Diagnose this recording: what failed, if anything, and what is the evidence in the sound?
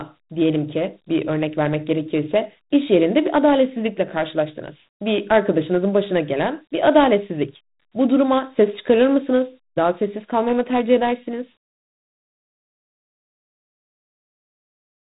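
The codec stage failed: the speech was stored as Dialogic VOX ADPCM, which fits 4-bit OKI ADPCM at 32 kbps. Each sample is only a coarse step from the last, so a gritty hiss tracks the speech throughout. Nothing above 3.8 kHz survives.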